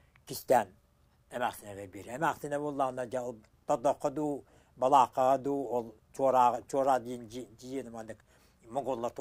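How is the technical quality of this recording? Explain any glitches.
No glitches or technical faults can be heard anywhere.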